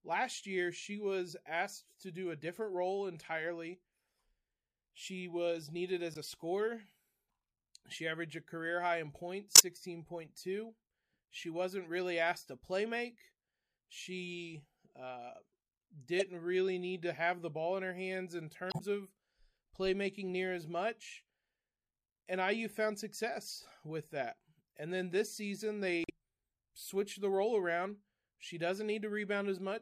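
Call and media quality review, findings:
Damaged data in a compressed stream: short glitches at 6.14–6.17, 9.55–9.60, 16.19–16.22, 18.69–18.81, 26.03–26.10 s. Decoder misreads corrupt frames, loses sync, resyncs at the next header.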